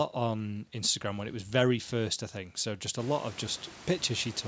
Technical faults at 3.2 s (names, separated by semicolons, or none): none